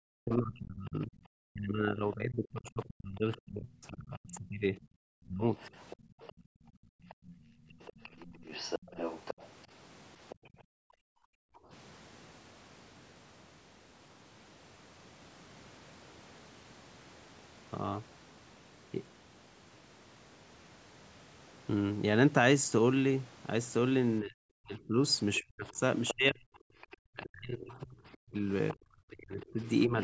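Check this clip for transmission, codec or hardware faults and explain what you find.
The clip has echo-canceller faults on a call. Three kinds are audible, clustered at the start and the end. The band stops at 8 kHz, as the call's microphone processing would leave it.

Speech suppressed in double talk runs from 0.0 to 5.43 s and again from 24.21 to 30.0 s. The talker's level sinks in patches, by roughly 35 dB early and close to 40 dB late. About four seconds are affected in the first stretch and about three in the second. This is likely because both ends spoke together. The canceller could not tell the talker from the loudspeaker echo, so it turned both down.

The other side's voice leaking through appears from 2.66 to 3.37 s, from 4.34 to 10.35 s, and from 25.34 to 29.68 s. A second voice sits under the talker. It is faint at first, around 25 dB down. In the longer stretches it is stronger, around 15 dB below the speech. 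The likely cause is echo left behind. The far end plays through a loudspeaker, and the canceller did not fully remove it from the microphone.

Background gated by the echo canceller shows as room sound dropping away. It happens from 5.96 to 8.03 s, by about 31 dB. It happens again from 10.35 to 11.7 s, by about 38 dB. A brief dip of about 20 dB follows from 26.69 to 26.76 s. While the loudspeaker played, the canceller clamped the microphone hard. The ambience vanished, then returned when it released.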